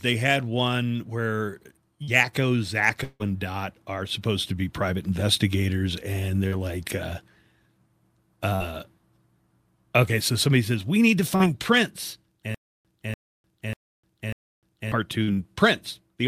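At 2.03 s, just after "they had one where", a short concealed packet loss occurs. About 40 ms of speech failed to arrive, and the receiver bridged the gap by extending the preceding sound before blending back. It is audible as a brief smear.

From 3.03 to 3.23 s there is a buzz or hiss that fades to silence, likely a long network dropout. Roughly 160 ms of signal never arrived, and the receiver synthesized a continuation that decayed, leaving about 30 ms of silence before real speech resumed.

The same roughly 40 ms concealment occurs again at 8.56 s, at 11.36 s after "says we need to", and at 15.24 s. Each produces a small wobble or smear.

Between 12.54 and 14.92 s, a 0.29 s fragment plays four times, with about 0.30 s of digital silence after each repeat, giving a period of about 0.59 s. This points to a likely stutter with silent gaps from a stalled stream, and the speech from that span is lost.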